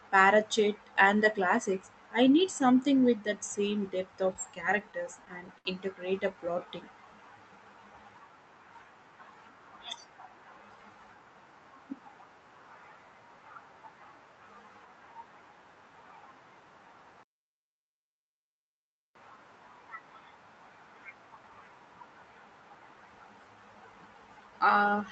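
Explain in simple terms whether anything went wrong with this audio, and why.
A few things went wrong, all caused by the network hiccuping while this speech was being received on a call.

From 4.33 to 5.67 s there are repeated stalls (stutter). Audio packets kept turning up late, so the receiver's little holding tank, the jitter buffer, ran dry ten times in that stretch. Each time, it stretched out the last sound to cover the wait, the longest wait being 72 ms. Nothing actually gets lost, but about 13% of that stretch is filler, so it drags and catches.

Right after, from 6.34 to 6.66 s, there's a jitter buffer slow-down. The buffer was still short on reserve, so the receiver quietly repeated tiny slices of the sound to rebuild it, adding 46 ms. The speech plays at about 88% speed there, sounding a bit drawn out but still at the same pitch.

Near the end, from 24.41 to 24.93 s, it's the opposite: a jitter buffer speed-up. 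Too much audio had piled up in the buffer, so the receiver snipped out small bits, roughly 70 ms in total, to catch up. That bit runs at about 110% speed and sounds slightly rushed, again with no change in pitch.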